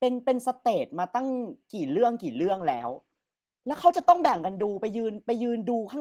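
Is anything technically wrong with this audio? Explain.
Yes. From 2.4 s to 5.85 s there is a call bitrate drop: the encoder's rate falls from 32 to 13 kbps, bottoming out for about 2.4 s. Coarser coding and lost high frequencies make the speech rough and muffled. Unlike packet loss, the sound stays continuous, without gaps or clicks.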